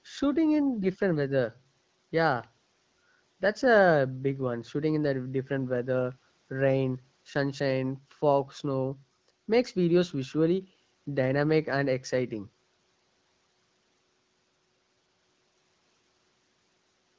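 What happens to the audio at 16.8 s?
Nothing goes wrong at 16.8 s: the speech there is intact, with no dropout, click, glitch or other fault.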